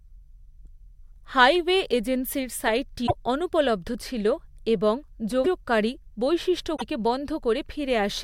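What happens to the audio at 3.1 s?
A likely broken MP3 bit reservoir: frames dropped out, so the next frame decoded another frame's bytes. From 3.06 to 3.11 s, between "হাইওয়ে এজেন্সির" and "অনুপলব্ধ ছিল এবং", the speech jumps ahead through a short garbled stretch, fitting roughly two 24 ms frames.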